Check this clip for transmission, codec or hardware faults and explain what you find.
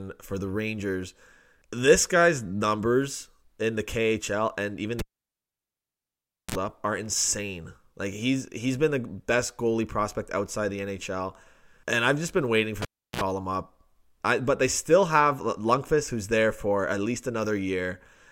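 Two hardware faults turn up in this speech, both the same thing: a cable pulled and plugged in while live. The first runs from 4.99 to 6.55 s and the second from 12.82 to 13.21 s. Each starts with a pop as the contact breaks, then near silence, about 1.5 s the first time and 0.34 s the second. As the plug goes back in, the tip touches first and picks up a short 60 Hz mains buzz, about 43 ms and then 55 ms. A second pop follows as the full connection seats and the sound returns.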